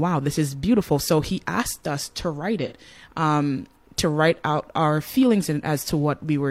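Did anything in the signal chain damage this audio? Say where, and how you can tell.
Yes. There is AAC frame loss with concealment at the codec or network stage, from 2.66 to 2.73 s, between "asked us to write" and "um to write out". About 43 ms of audio is missing, which fits a single lost AAC frame. The decoder had no data for that stretch, so it rebuilt it from the last good spectrum, with scrambled signs or interpolated energy. That is why the gap sounds like a brief smeared, noisy or phasey patch rather than silence.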